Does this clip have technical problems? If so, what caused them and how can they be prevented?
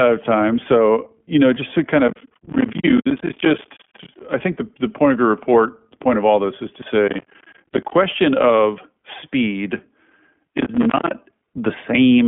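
Yes. Throughout the speech, the signal has passed through the iLBC codec, a narrowband VoIP coder that encodes each frame's excitation on its own. The sound suggests 20 ms frames and fits iLBC's 15.2 kbps mode. The line band runs from about 150 Hz to 3.4 kHz, with nothing above 3.7 kHz, so the speech sounds muffled and plainly rough and synthetic. To prevent this, negotiate a wideband codec such as Opus or G.722 instead of iLBC.

Processor overload crackle appears from 2.08 to 4.21 s, from 7.08 to 7.95 s and from 10.47 to 11.15 s. In each stretch the processor fell behind and missed many consecutive buffer deadlines, which fits buffers of around 10 ms. Each missed buffer became a short hard-edged gap of silence. Dozens of these gaps in a row tear the speech into a gritty crackle that stops once the load eases. To prevent it, reduce CPU load on the audio path or enlarge the buffer so deadlines are met.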